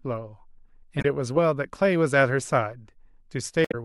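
At 0.98 s the speech breaks into a short glitch lasting about 0.07 s. A second one follows at 3.62 s, lasting about 0.13 s. Both come from damaged data in a compressed stream. The decoder misreads corrupted frames and loses sync.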